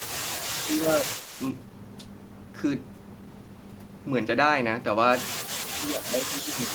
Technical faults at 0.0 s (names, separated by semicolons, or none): echo leak